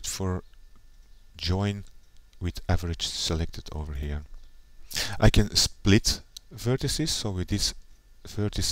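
No technical faults are audible anywhere in the clip.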